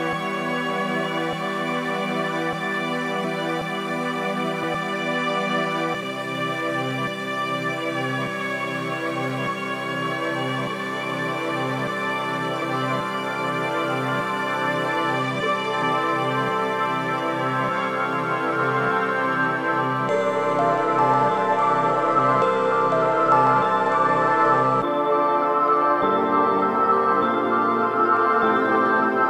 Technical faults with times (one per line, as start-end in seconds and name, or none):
3.23 compressed frames skipped
4.62 compressed frames skipped
6.02 compressed frames skipped
12.61 compressed frames skipped